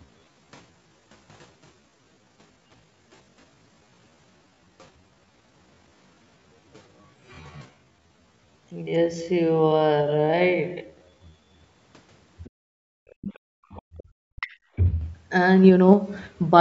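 From the start to 11.62 s the speech plays at about 0.61 times its natural pace with the pitch unchanged. This time-stretched section is likely the work of software repeating short slices to lengthen the audio, and on a spectrogram the harmonics look blurred and repeated.

At 12.44 to 12.50 s a faint scrap of the other side's voice leaks through, about 35 dB below the speech. It shows on a spectrogram as a brief, thin patch of separate harmonics that the echo canceller likely failed to remove.

Right after, from 12.50 to 13.21 s, the background is gated by the echo canceller. For roughly half a second the room sound drops by up to about 40 dB while the loudspeaker plays. On a waveform the noise floor collapses to near-flat and then returns.

The leak comes back more strongly at 13.21 to 13.39 s, about 20 dB below the speech. From 13.39 to 14.06 s the gating repeats, with a drop of up to about 39 dB. 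Inside that span, from 13.70 to 14.03 s, further leakage sits about 30 dB down.

From 14.34 to 14.76 s the speech is suppressed in double talk. Over roughly 0.4 s the talker's voice dips by around 40 dB, likely because the canceller could not separate the voice from the echo while both sides spoke. The spectrogram shows the speech energy abruptly carved away.

Throughout the clip, the call's microphone path takes out the lowest bass, which is normal.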